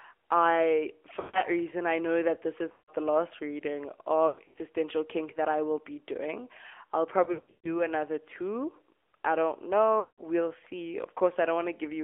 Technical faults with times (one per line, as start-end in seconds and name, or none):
0.00-12.04 AMR narrowband mobile codec
1.20-1.44 lost AMR speech frames
2.72-2.95 lost AMR speech frames
4.28-4.58 lost AMR speech frames
7.24-7.81 lost AMR speech frames
10.00-10.22 lost AMR speech frames